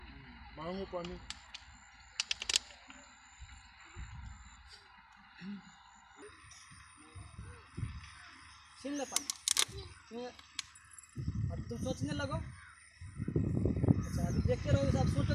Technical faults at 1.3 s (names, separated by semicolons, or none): section at the wrong speed